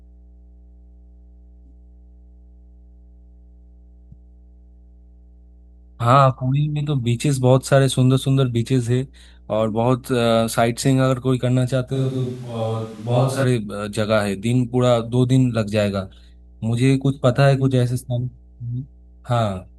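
A steady mains hum runs under the whole recording. It sits at 60 Hz, with some low harmonics above it. The hum is roughly 30 dB below the speech. A ground loop or a nearby transformer has let the power line leak into the signal path. It sounds like a constant low drone that never changes pitch.

From 11.96 s to 13.43 s the speech turns roomy and hollow. The bass thins out abruptly. Background noise rises to around 30 dB below the speech. The overall level stays about the same. The change in and out is sudden, with no fade. This points to a switch to a distant microphone. Most likely the close microphone's signal dropped and a farther one, such as a camera microphone, covered the gap.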